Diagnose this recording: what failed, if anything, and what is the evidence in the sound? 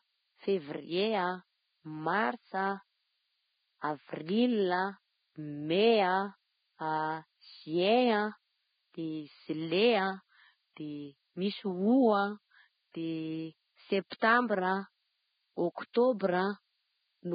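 A switching power supply in the analogue path is leaking a burst-mode whistle into the signal. A thin tone sits between 12.86 and 13.04 kHz for the whole clip, drifting within that band, about 25 dB below the speech.

Throughout, the speech has nothing above 4.9 kHz and sounds grainy and hissy, with roughened vowels and smeared consonant onsets. The likely cause is heavy Vorbis compression at the codec stage, consistent with a bitrate near 14 kbps, coarsely quantising residue and discarding treble.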